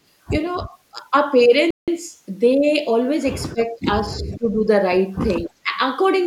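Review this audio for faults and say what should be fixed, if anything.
The voice dips in level at four points: briefly and lightly at 0.94 to 0.99 s, then much more deeply, by about 20 dB, at 3.53 to 3.88 s, 4.19 to 4.59 s and 5.45 to 5.74 s, where parts of the speech nearly vanish. This is likely speech suppressed in double talk. With both ends talking at once, the echo canceller could not tell the local talker from loudspeaker echo and pulled both down. Better double-talk detection, or a headset that keeps far-end audio out of the microphone, would prevent it.

At 1.71 s the audio drops to complete silence for 172 ms, then resumes at 1.88 s. The likely cause is a Bluetooth stall. Radio interference delayed packets, the headphone buffer emptied, and playback paused until the retransmitted data arrived. Reducing 2.4 GHz interference and keeping the phone close to the headphones would prevent it.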